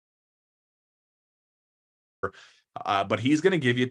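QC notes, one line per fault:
0.00–2.23 s: audio dropout to silence. The clip opens inside a stretch of digital silence that is already in progress at the first sample and runs for a little over two seconds. There is no room tone, hiss or any trace of the speech in that span, only silence, until the signal returns abruptly at 2.23 s. This most likely comes from a lost input, such as a disconnected device, a broken link or a mute, while the recorder kept writing samples, so whatever was spoken there is not recoverable.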